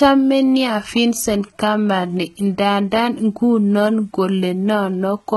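Speech, with heavy damage throughout from likely HE-AAC compression: the treble is rebuilt from copied lower bands, so s sounds come out gritty and metallic, and nothing reaches above 11.8 kHz. The coarseness points to a very low bitrate, around 16 kbps.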